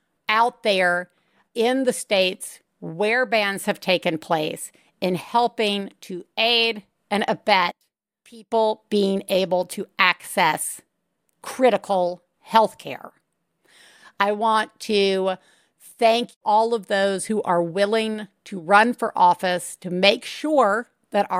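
From 7.71 to 8.51 s the speech drops about 20 dB, likely one channel inverted, so the shared centre cancels when summed to mono.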